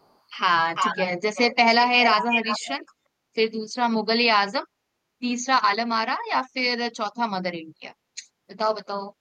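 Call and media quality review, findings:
Echo leak, speech: faint delayed copy 0.02–0.15 s at 478 ms; then 351 ms copies at 0.75–1.05 s (near speech level), 1.35–2.14 s and 2.33–2.69 s (about 5 dB down). Likely far-end echo canceller leaking loudspeaker pickup. Discrete repeat, not smeared room reverb.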